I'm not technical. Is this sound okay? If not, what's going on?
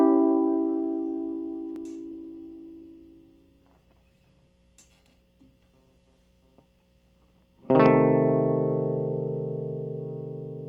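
No. From about 2.12 s to 6.25 s there is a call bitrate drop: the call's connection judged it had much less room, so the music was squeezed into far less data for about four seconds. The music loses its top end, with everything above roughly 12 kHz cut away, and the remaining sound is coded more crudely, making it duller and rough or watery until the fuller quality returns at 6.25 s.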